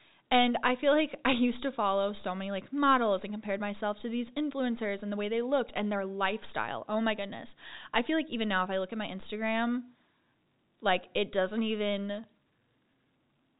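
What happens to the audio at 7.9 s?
Nothing goes wrong at 7.9 s: the speech carries on intact, with only the narrow telephone band of G.711 telephone coding that runs through the whole recording.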